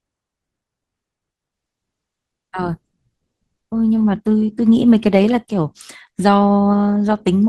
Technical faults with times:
1.53-7.48 adaptive stream at a lower bitrate

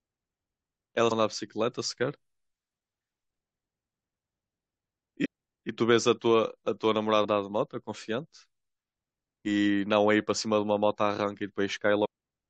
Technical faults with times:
1.10 damaged data in a compressed stream
5.24-5.26 damaged data in a compressed stream
7.23-7.25 damaged data in a compressed stream
12.04-12.06 damaged data in a compressed stream

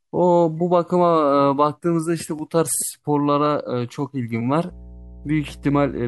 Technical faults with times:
4.68-6.07 mains hum

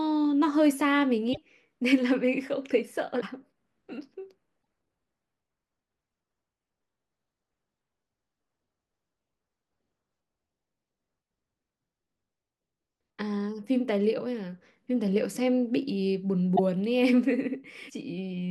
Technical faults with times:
1.32-1.38 broken MP3 bit reservoir
3.20-3.23 broken MP3 bit reservoir
4.61 broken MP3 bit reservoir
16.55-16.59 broken MP3 bit reservoir
17.88-17.91 broken MP3 bit reservoir

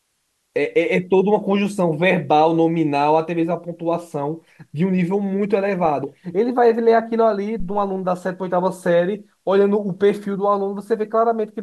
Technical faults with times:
7.60-7.96 phantom power thump

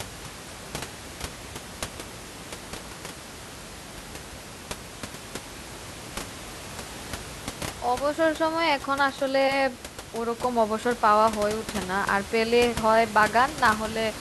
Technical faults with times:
none

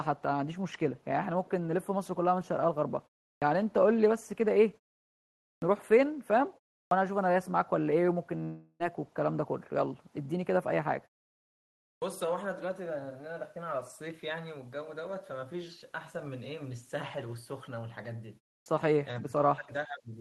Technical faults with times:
3.38-3.42 clipped start after a pause
5.58-5.62 clipped start after a pause
6.87-6.91 clipped start after a pause
8.43-8.83 long network dropout
11.98-12.02 clipped start after a pause
18.62-18.66 clipped start after a pause
19.21-20.13 speech suppressed in double talk

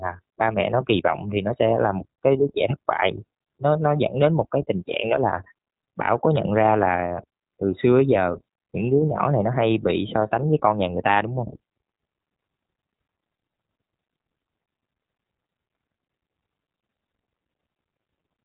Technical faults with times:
0.00-18.45 iLBC codec

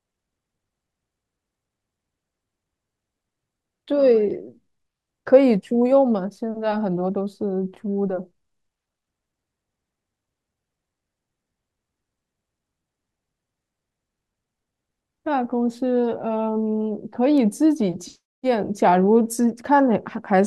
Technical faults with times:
17.38 bit error spike

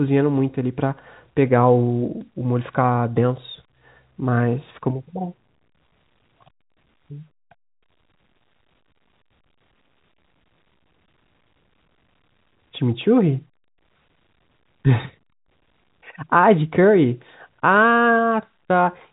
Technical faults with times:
none

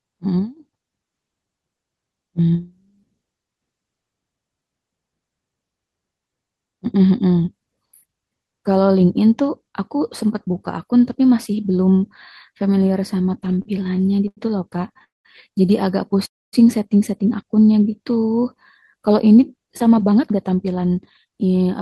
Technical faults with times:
13.45-14.39 repeated stalls (stutter)
14.77-15.02 repeated stalls (stutter)
15.04-15.27 call audio freeze
16.26-16.55 call audio freeze
17.55-18.12 jitter buffer slow-down
19.82-21.65 jitter buffer speed-up

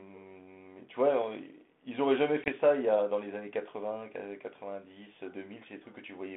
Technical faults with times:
2.44-2.49 packet loss on an ADPCM call

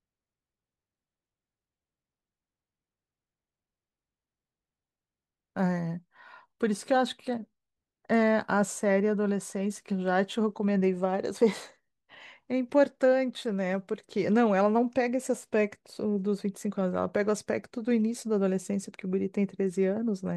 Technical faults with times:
none

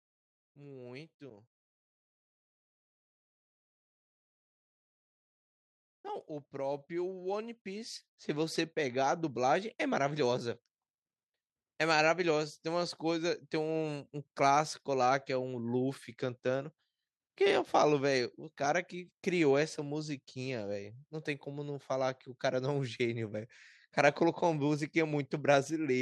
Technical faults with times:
0.56-1.52 automatic gain rising
6.02-10.27 automatic gain rising

